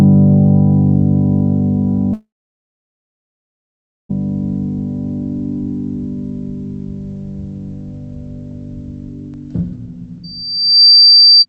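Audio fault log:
2.13–4.11 s, long network dropout: about 2 s of audio never plays. A brief fading buzz continues the last sound, then roughly 1.8 s of silence, and the audio resumes further on. This fits a likely stall in packet delivery that concealment could only briefly cover.
10.23–11.46 s, loudspeaker feedback squeal: a single 4.7 kHz tone swells over roughly 0.7 s to about 10 dB above the signal. A microphone is picking up its own loudspeaker, and at that frequency the loop gain exceeds one, so the tone keeps growing.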